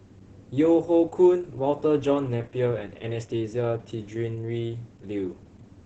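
From start to end this speech has heavy Opus voice compression damage. The linear-prediction coder keeps the band at about 8 kHz and quantises the excitation coarsely, so voices sound muffled, hoarse and a bit robotic, which fits a bitrate around 10 kbps.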